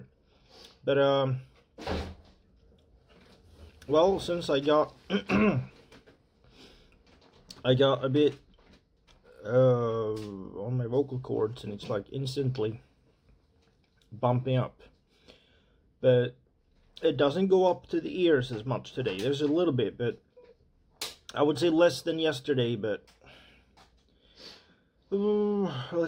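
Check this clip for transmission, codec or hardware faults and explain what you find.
There's one fault, and it runs through the whole clip: imaging from linear upsampling. It sounds like a conversion from 24 kHz to 48 kHz using simple straight-line interpolation between samples, which filters poorly. The top of the original band gets dulled, and a faint mirrored copy of the spectrum leaks into the 12 to 24 kHz region, roughly 40 dB below the signal. You hear it as a light metallic shimmer on the brightest, high-frequency parts of the sound.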